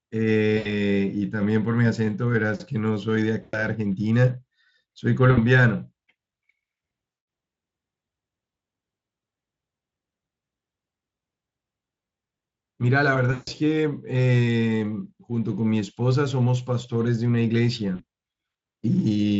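Speech, carried over a Speex link whose coding damage is faint, suffers VoIP packet loss concealed by the speech codec: the decoder extrapolated the missing audio from its last pitch and filter, producing stretched, buzzy, fading sound at 0.57–0.71, 3.41–3.67, 5.31–5.39, 7.11–7.27, 13.31–13.49 and 17.95–18.03 s.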